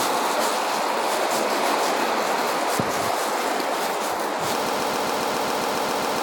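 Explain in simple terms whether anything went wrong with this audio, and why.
Something did go wrong near the end. From 4.66 s to the end of the clip, the audio falls into a broken-record loop: one short slice, about 0.14 s long, plays over and over, back to back, twelve times. The likely cause is that the player or stream stalled and kept resending the last piece it was holding. Whatever sound should have followed in those final seconds never arrives.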